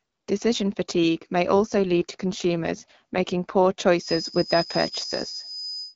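Just after "fatigue may", from 1.54 s to 3.54 s, the speech goes through an AMR rate drop. The bandwidth stays the same and nothing drops out, but the speech turns coarser and more synthetic, then recovers at 3.54 s. That fits the network pushing the AMR-WB coder down from 12.65 to 8.85 kbit/s so that more bits go to error protection. It differs from a packet-loss glitch because there is no gap and no repeated fragment, only a stretch of rougher texture.

From 3.96 s to the end of the clip, a thin, steady feedback whistle near 5 kHz sits about 10 dB below the speech. Its level swells and fades slowly. The likely cause is a loudspeaker-to-microphone loop held just short of instability. It differs from full howl-round because the tone never swells into a screech. It also differs from electrical hum because it is a single high pitch, not a low buzz with harmonics.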